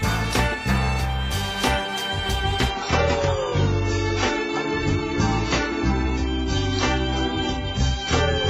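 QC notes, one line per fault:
2.70–8.49 s: adaptive stream at a lower bitrate. Treble abruptly stops above 7.6 kHz with no gap, and artefacts rise. This fits a switch to roughly 16 kbit/s AAC.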